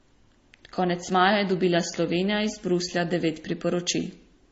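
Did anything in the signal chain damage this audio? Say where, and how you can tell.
Yes. The damage sits at the codec stage and runs through the whole speech clip. Nothing is present above 7.6 kHz, and that hard ceiling holds from start to end. Two kinds of compression smear are heard layered together. The likely cause is transcoding between lossy codecs: an MP3 pass followed by AAC-LC, both at rates that sound near 32 kbit/s. The second encoder spends its bits re-encoding the first one's artefacts, and adds its own. The lower bandwidth limit stays.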